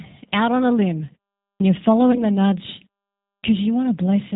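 Throughout, the speech carries G.729 codec damage at 8 kbit/s: rough, slightly synthetic timbre, with a spectrogram showing nothing above 4 kHz. At 1.5 s, after a 0.42 s pause, comes a clipped start after a pause. The output device was still waking, so about 0.1 s of the onset is swallowed, and the waveform jumps from flat silence straight into mid-sound amplitude. From 2.12 to 2.24 s, VoIP packet loss concealed by the speech codec fills a 20 ms gap, which fits one lost packet, with extrapolated sound that fades. It shows as smeared, fading energy, and the voice stays weak or distorted briefly afterward. At 3.33 s, after a 0.54 s pause, a second clipped start cuts about 0.1 s of onset, producing another abrupt vertical edge in the waveform.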